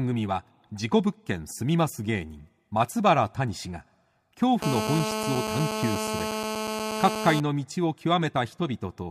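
From 4.62 to 7.40 s, GSM phone buzz: a handset's 217 Hz call bursts get rectified into a steady rasp, harsher than mains hum.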